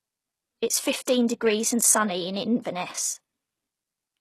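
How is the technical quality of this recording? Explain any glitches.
The recording is noticeably compromised, with plainly audible codec damage throughout and a couple of small smears early on.

All the way through, the speech sounds like HE-AAC compression is the likely cause: treble rebuilt from copied lower bands turns s sounds gritty and lispy, there's nothing above 12.3 kHz, and the overall quality points to roughly 16 kbps.

At 1.05 to 1.07 s and again at 1.28 s, just before "degrees and sunny in", there's pre-echo. Block-spread quantisation noise leaks ahead of the attacks as a brief hiss, softening their onsets.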